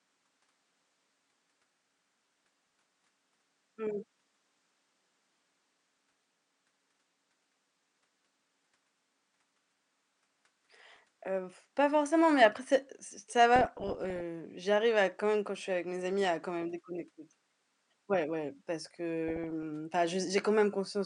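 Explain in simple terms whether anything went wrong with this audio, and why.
The speech carries DAB burbling in six places: 2.31–2.74 s, 5.93–6.15 s, 10.96–10.99 s, 13.56–14.21 s (between "après c'est ç ça" and "j'arrive à quand même"), 16.10–16.28 s, and 19.28–19.63 s (after "ouais parce"). Weak digital radio reception let corrupted data slip past error correction, so individual frequency bands briefly jump in loudness, giving short watery blips. The longest and roughest burst is at 13.56 s. The faint room noise underneath comes from the recording space.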